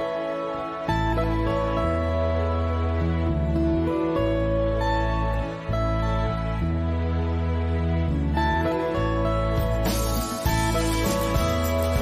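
No technical faults can be heard anywhere in the audio.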